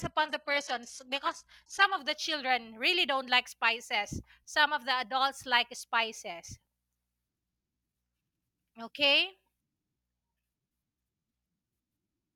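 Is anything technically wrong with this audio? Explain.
Yes. From 0.0 to 2.0 s, the adaptive stream starts at a low bitrate. The treble is dull and synthetic, consistent with a low-rate HE-AAC version, then it jumps cleanly to a better AAC-LC 96 kbit/s version, with no gap, just before "the children really".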